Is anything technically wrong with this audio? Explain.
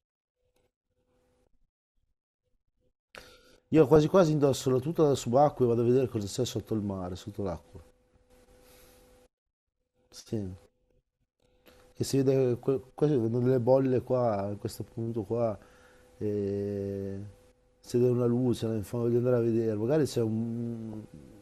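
Yes. MP2 compression, likely running at a low rate around 80 kbps, starves the upper sub-bands of bits throughout, leaving the speech dull, gurgly and granular.

DAB burbling occurs at 3.78 to 4.07 s, 14.04 to 14.11 s and 20.92 to 20.96 s. Reception bit errors corrupt sub-band samples, producing brief blips of noise in single sub-bands.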